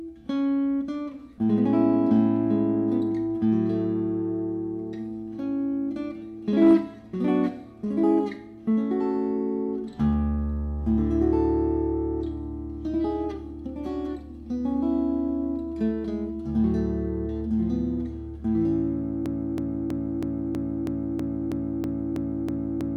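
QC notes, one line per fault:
19.26 s to end: broken-record loop. A 0.32 s fragment repeats exactly, back to back, 12 times until the clip stops, and the audio that belonged there is missing. This is likely a stalled player, encoder or stream re-sending its last held fragment.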